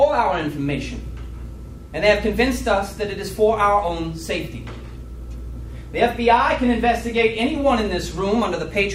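A soft, steady rattle of clock slip clicks runs from 0.11 to 8.95 s, ticking roughly every 70 ms, likely from unsynced clocks a few hundred ppm apart.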